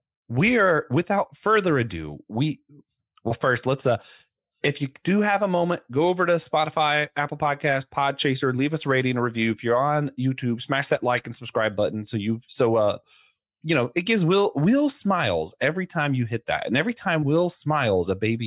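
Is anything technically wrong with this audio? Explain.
No, nothing in this speech recording points to a technical problem. There is no audible fault to single out at any point in it.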